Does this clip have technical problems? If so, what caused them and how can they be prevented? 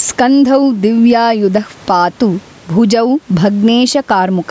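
Yes. Gain pumping throughout: the gain swings roughly 10 dB with loud speech, likely from excessive mic gain driving a fast limiter. Lower input gain to prevent it.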